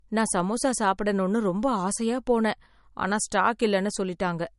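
Low-bitrate audio saved at a high bitrate runs through the whole clip. Nothing in the speech reaches above 11.2 kHz, leaving a hard ceiling that makes sibilants sound dull and closed in, with the artefacts of the first encoding still present. The cause is likely an MP3 first squeezed to a low rate, around 48 kbit/s, then re-encoded much higher. The second pass could not restore the discarded detail.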